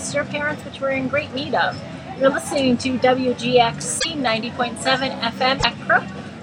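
At 3.99 to 4.06 s and again at 5.58 to 5.64 s the audio skips forward into a brief garbled chirp or burst, about two to three 26.1 ms frames long. This is likely a broken MP3 bit reservoir: after missing frames, the following ones borrow bits from the wrong data.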